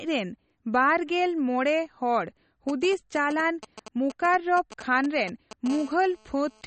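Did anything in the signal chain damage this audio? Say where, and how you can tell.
Yes. MP3 compression runs through the whole speech clip: nothing is left above 8.4 kHz, and the sound has a plainly audible watery swirl. That is the codec stage, likely a low-bitrate MP3 encode (it fits about 32 kbps) that cut the treble and dropped weak frequency lines from frame to frame.

GSM signalling bursts appear from 2.69 to 5.68 s as a galloping dit-dit-dit of short 217 Hz buzzes, around 15 dB below the speech. This damage is in the analogue wiring: a nearby 2G phone was signalling, and the audio circuit rectified its intermittent radio bursts.

GSM phone buzz follows from 5.70 to 6.62 s as a steady, raspy 217 Hz buzz, about 22 dB below the speech and unrelated to it. A nearby 2G phone is now in a call, transmitting in bursts 217 times a second, and the analogue circuitry rectifies every pulse.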